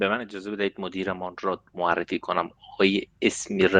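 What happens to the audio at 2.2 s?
Nothing goes wrong at 2.2 s: the speech carries straight through that moment with no dropout, glitch or distortion, just the ordinary band-limited sound of a call codec working normally.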